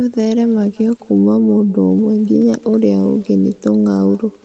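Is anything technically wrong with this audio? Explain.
Yes, there is one fault, present throughout the speech.

Echo with no canceller runs for the whole clip. The far end is playing the call through a loudspeaker, and its microphone picks that sound up and sends it back with nothing removing it. Every phrase is therefore trailed, roughly a fifth of a second later, by a faint copy about 25 dB below the speech. That copy sounds thinner than the original, a ghostly shadow behind the talker. The audio's top end stops at 8 kHz, as expected for this call path.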